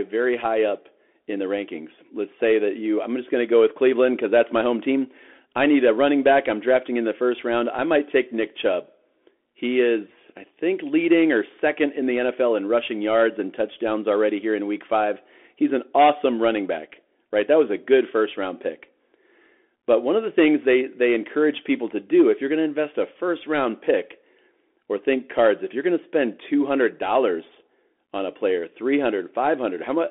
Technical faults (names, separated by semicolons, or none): Bluetooth CVSD headset codec